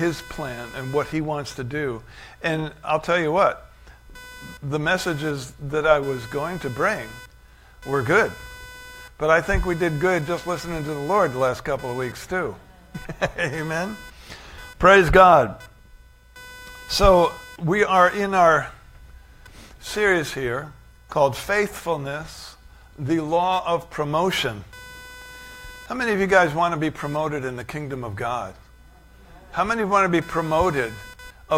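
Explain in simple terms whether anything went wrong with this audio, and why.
The computer's own electrical activity leaked into the recording, a fault called computer activity noise. The processor, graphics card and mouse shared an electrical ground with the audio circuit, and each time their workload shifted, that ground wobbled and the recording picked it up. From start to finish there is a faint buzzing and chirping underneath, pulsing roughly 500 times a second. It rises and falls with whatever the computer is doing, not with the sound itself.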